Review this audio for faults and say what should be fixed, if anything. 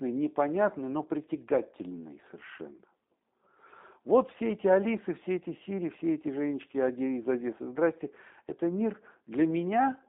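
Throughout the speech, G.729 codec damage: nothing passes above about 3.7 kHz or below 250 Hz, and the rough, synthetic texture points to 8 kbit/s pulse-based rebuilding, not simple band-limiting. Prevent it by carrying the call over a wideband or higher-bitrate codec instead of G.729.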